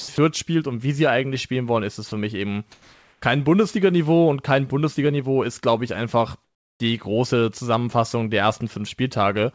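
At 0.00 to 0.08 s, 0.16 to 0.18 s and 2.08 to 2.12 s, brief stretches of speech vanish into flat hiss: sound dropped by the voice detector, likely because it mistook quiet speech for background and stopped sending. From 2.72 to 3.22 s and again from 6.44 to 6.80 s, the real background turns into smooth, featureless noise, barely quieter the first time and about 10 dB quieter the second. That is comfort noise in place of the background, likely synthesised by the receiver while the sender paused transmission. Throughout, nothing is heard above 8 kHz, which points to a wideband call codec.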